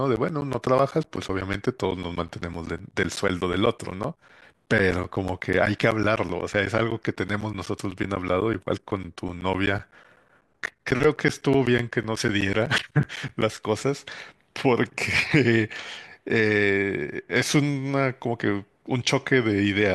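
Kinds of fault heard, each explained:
Periodic USB or driver dropouts: something blocks the audio path every 0.125 s, leaving gaps of about 10 ms of silence. These sound as regular ticks through the speech from 0.16 to 13.4 s.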